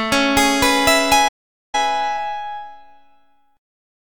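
At 1.28 s the sound cuts off mid-flow and stays silent until 1.75 s, a gap of about 0.45 s, before continuing. This is a playback stall, most likely the player running short of buffered data or its output thread being blocked, so nothing reached the output until it recovered. On a waveform the trace drops abruptly to a flat line across that span. A spectrogram shows a clean vertical blank band with sharp edges at both ends.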